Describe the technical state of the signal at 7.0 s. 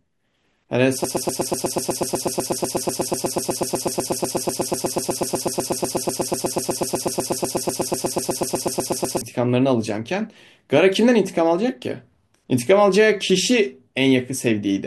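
At 7.0 s the speech is stuck in a broken-record loop: a fragment of about 123 ms repeats exactly, back to back, giving a rapid stutter at roughly eight repeats per second. The loop runs from 1.04 s to 9.21 s, about 66 repetitions in all. The likely cause is a stalled player, encoder or stream that kept resending the last chunk it held, so the speech that belonged to that stretch is lost.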